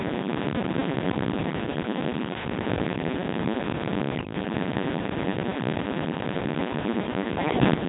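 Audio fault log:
Throughout: Codec 2 vocoder. The speech sounds robotic and buzzy, with heavy damage to its character. Only pitch, voicing, energy and a rough spectral envelope survive. The decoder rebuilds the voice from sine waves, which fits a very low rate near 2.4 kbit/s.
4.16–4.33 s and 7.38–7.74 s: bit errors on digital voice radio. The synthetic voice jumps in pitch, level and tone colour, breaking into bleeps and warbles. Flipped bits, a few percent, corrupt whole vocoder frames. The second burst is longer.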